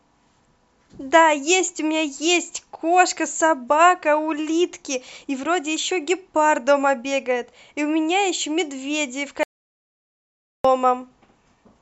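The input was likely lost for a moment while the recorder kept writing silence, an audio dropout to silence from 9.43 to 10.65 s. The speech cuts off abruptly into total silence with no room tone, and about 1.2 s of speech is missing before it resumes mid-flow.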